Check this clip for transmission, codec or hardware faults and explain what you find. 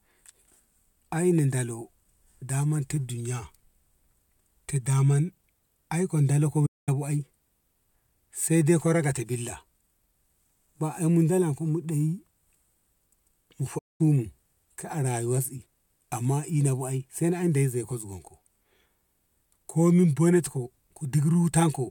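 Two playback stalls interrupt the speech. At 6.66 to 6.89 s and again at 13.78 to 14.01 s the audio cuts to silence for about 0.21 s, then resumes. The likely cause is the player starving for data or its output thread being briefly blocked.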